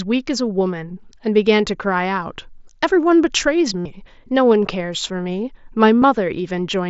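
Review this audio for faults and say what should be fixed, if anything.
A buzzy held tone from 3.79 to 3.86 s and a brief one at 6.00 s: concealed Bluetooth headset packet loss, with lost packets replaced by repeated recent waveform. Improve the headset-to-phone radio link by reducing distance and obstructions and avoiding 2.4 GHz interference.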